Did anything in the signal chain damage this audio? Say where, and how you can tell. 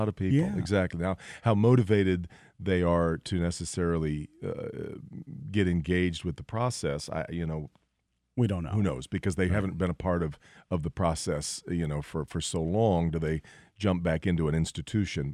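Yes. From about 5.41 s to the end, the speech picks up a gritty, inharmonic fizz that rides on the louder and brighter sounds. That's crude rate conversion at the sample-format conversion stage. The pattern fits a 44.1 kHz to 48 kHz change done by linear interpolation without a proper anti-aliasing filter. The interpolation error repeats with the beat between the two rates and leaves unrelated tones roughly 40 dB under the signal.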